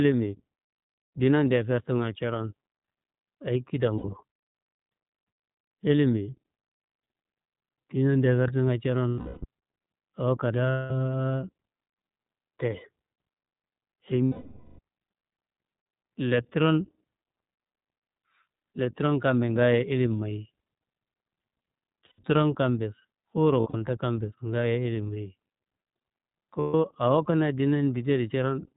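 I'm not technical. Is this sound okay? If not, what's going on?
No, not quite. The whole clip has gone through the iLBC codec, a squeezed-down phone-call format that drops everything above 4 kHz. That's why the speech sounds dull and boxed-in, like an old phone line, with a rough, slightly synthetic edge. The damage is easy to hear, but the speech itself is still clear enough to follow.

On top of that there are lost iLBC frames: bits of the call never arrived, so the decoder covered each gap by repeating the last bit of voice with a little noise mixed in. You'll hear it as a brief held, buzzy or breathy vowel sound at 3.98 s (about 0.06 s), 9.08 s (0.36 s), 10.70 s (0.2 s), 14.25 s (0.54 s, the longest), 22.06 s (0.12 s), 23.60 s (a few short dropouts spread over 0.2 s) and 26.60 s (0.14 s). Each time the voice snaps back to normal almost immediately.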